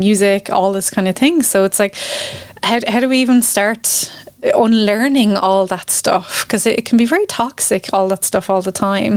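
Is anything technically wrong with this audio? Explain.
Yes. Gain pumping runs through the whole speech clip. The level swings by about 15 dB. That points to input gain set far too high, likely with a fast limiter or compressor clamping down on every peak, so the dynamics sound squashed and breathing.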